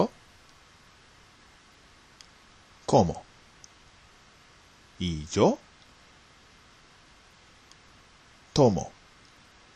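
A scratch or blemish on the disc wipes out more data than error correction can restore, once per revolution, so the player patches or mutes those samples. Between 5.55 and 5.88 s this gives three CD scratch ticks, each at most about a millisecond long.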